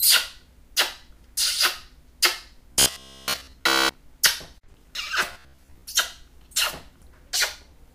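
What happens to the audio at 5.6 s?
Between 5.33 and 5.82 s, new audio likely arrived too seldom, so playback looped its last roughly 15 ms buffer for most of that span while the real sound was skipped. This robotic sound from repeated short buffers is a rigid, metallic buzz at 66.8 Hz.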